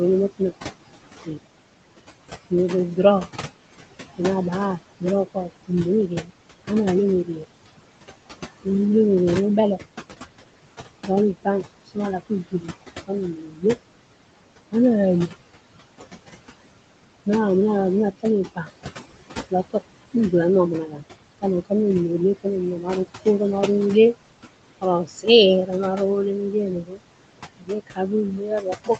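Noise suppressor artifacts run through the whole recording. The room noise, about 11 dB below the speech, is pulled down by about 20 dB wherever the suppressor judges it steady. It sinks in the pauses and swells back under speech. This residue pumps with the speech.

Speech cut by the noise suppressor occurs at 0.29–1.38 s, 2.5–7.67 s, 11.05–13.64 s, 18.19–23.26 s and 24.81 s to the end. Soft consonants and word endings are mistaken for noise and turned down by about 20 dB, and by about 22 dB in the final stretch. Within each of the first four spans only a few hundred milliseconds are affected. The swallowed sounds fade rather than vanish, with no clicks or hard silences, which separates this from packet-loss dropouts. The top end stops near 8 kHz, as expected from the call codec's band limit.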